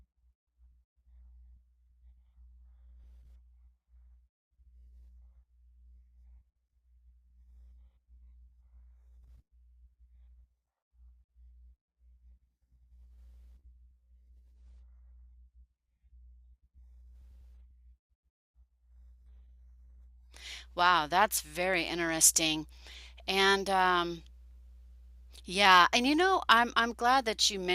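From 14.54 to 16.54 s the speech abruptly drops to an adaptive stream at a lower bitrate, which fits a switch from 96 to 32 kbit/s AAC. Codec artefacts rise. A spectrogram shows a sudden change in quality, while the waveform continues without any gap.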